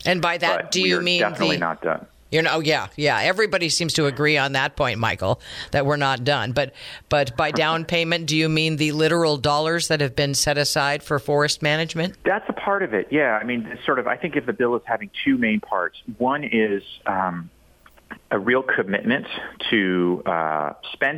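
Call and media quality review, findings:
No audible faults found.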